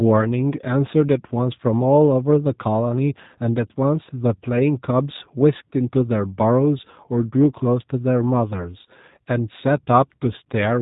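From start to finish the speech carries G.729 codec damage, plainly audible as a rough, slightly synthetic buzz, which fits 8 kbit/s coding. The rebuilt pulses lose fine detail, and a spectrogram shows a hard ceiling with nothing above 3.8 kHz.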